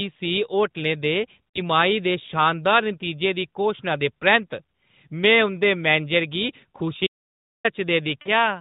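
Radio errors corrupted AMR speech frames, and the decoder concealed them by repeating its last good pitch and vocal-tract settings at falling gain. Between 1.50 and 1.60 s, after "होटलै दे" and before "दे शानदार", the lost AMR speech frames cost about 40 ms of audio, roughly two 20 ms frames. The sound smears into a brief warbling dip, then returns slightly weak. The same happens from 8.22 to 8.30 s, a short drawn-out blur before the level recovers.

From 7.07 to 7.65 s the input was lost, likely through a dropped link or device, while silence kept being written. This audio dropout to silence cuts the sound off mid-flow for about 0.58 s. The gap is dead digital silence with no room tone, and the sound resumes abruptly, with whatever was said in between gone. Throughout, the AMR narrowband band limit keeps everything below 4 kHz, with the light coloration of a high-rate mode such as 12.2 kbps.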